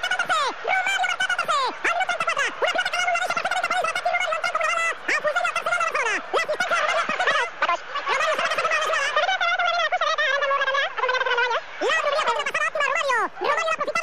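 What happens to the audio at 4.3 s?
At 4.3 s the audio is being read two samples at a time, as it is throughout the clip. Sample pairs become single frames. Everything plays at double speed, an octave higher.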